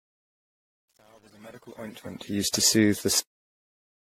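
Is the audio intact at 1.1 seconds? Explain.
No. At 1.1 s the sound sits inside a fade-in that runs from the start to 2.45 s and carries truncation distortion on a fade, worst from 0 to 2.11 s. The fade stage keeps only about 9 bits without dither, so the quiet waveform collapses into coarse steps and sounds gritty. Unlike steady noise, the grit follows the level, clearing as the fade rises.

Generation loss is also present at that moment, as throughout the clip. The sound is more swirly, smeared and hollow than a single low-bitrate encode would produce, with blurred attacks and nothing above 16.5 kHz. That points to the audio having likely been re-encoded around seven times with an AAC-type codec near 42 kbit/s, each pass adding fresh quantisation noise and spectral holes on a shifted frame grid.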